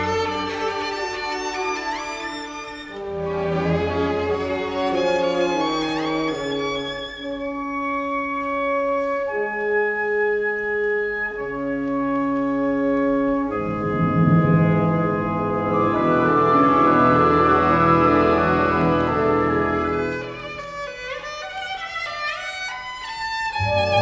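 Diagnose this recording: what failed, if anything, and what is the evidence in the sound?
Nothing failed, and the sound offers no evidence of a fault at any stage of the chain.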